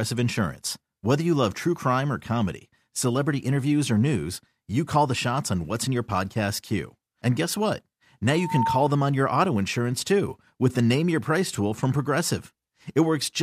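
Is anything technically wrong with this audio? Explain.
Yes. From 8.32 to 8.98 s there is loudspeaker feedback squeal. The microphone was picking up the loudspeaker it was driving, and around 908 Hz the gain round that loop rose above unity, so that frequency fed on itself and kept growing. A pure tone swells over about a third of a second into a squeal roughly as loud as the speech, then cuts off just before "on your auto insurance".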